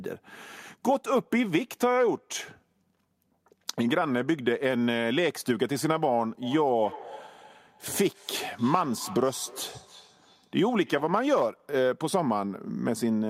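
From 6.42 s to 11.35 s there is feedback echo between two devices. A second device nearby replays the call, and this microphone picks it up again. The local echo canceller misses it. Speech returns roughly every third of a second, peaking about 18 dB below.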